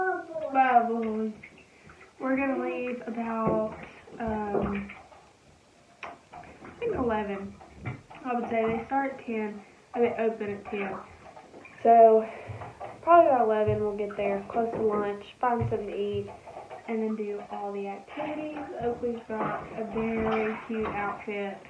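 No technical faults detected anywhere in the audio.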